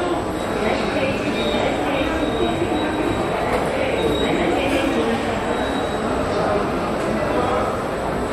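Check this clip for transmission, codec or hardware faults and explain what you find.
One hardware fault is present: mains hum, running for the whole clip. A steady low tone sits at 60 Hz beneath the sound, which points to power-line current leaking into the signal path, likely through a ground loop between connected pieces of equipment or through magnetic pickup from a nearby transformer. It stays constant regardless of what the sound is doing. It is clearly audible but quieter than the main sound, somewhere around 20 dB down, giving a continuous buzzing drone underneath.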